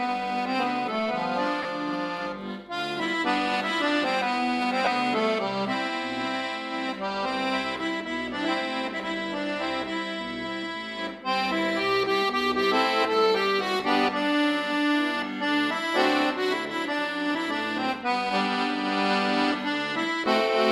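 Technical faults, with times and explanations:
1.62 to 1.65 s and 4.85 to 4.87 s, lost LE Audio frames: Bluetooth LE Audio dropped 22.5 ms and then 15 ms of audio, which fits losses of three and two 7.5 ms frames. The LC3 decoder filled each gap by repeating the last spectrum with randomised signs, so tonal content briefly turns into a noisy smear.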